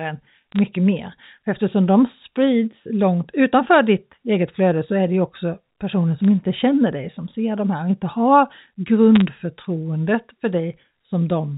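Bit errors on a digital phone line cause brief crackle bursts at 0.52 to 0.59 s, 6.18 to 6.26 s and 9.15 to 9.21 s. Roughly two bits per thousand flip, corrupting single A-law samples; hits on high bits or on the sign of loud samples make sharp ticks. These appear as isolated waveform spikes and thin vertical spectrogram lines reaching 4 kHz.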